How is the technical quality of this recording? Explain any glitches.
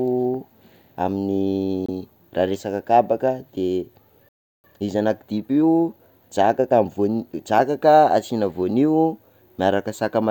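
Three glitches affect the recording.

At 1.86 to 1.90 s there is a corrupt frame decoded. Flipped bits in what sounds like a single compressed frame were played anyway. Misread values put energy at wrong frequencies. It comes out as a short chirp-like blip.

At 4.29 s a playback stall begins. The speech cuts off mid-flow and goes silent for about 0.35 s, until 4.64 s. The likely cause is the player running out of data or its thread being blocked.

From 4.64 to 7.64 s comes time-compressed catch-up. The player clears its backlog by cutting and cross-fading small slices. The speech runs at 1.1 times normal speed. Pitch stays normal, but the delivery sounds hurried.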